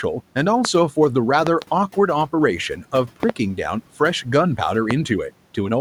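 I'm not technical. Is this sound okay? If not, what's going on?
No. There are loud pops, sharp thumps sitting on top of the speech, which carries on underneath. Single pops land at 0.65 to 0.67 and 4.91 to 4.93 seconds, and quick double pops at 1.47 to 1.64 and 3.23 to 3.32 seconds. They're likely electrical glitches from a cable, switch or static.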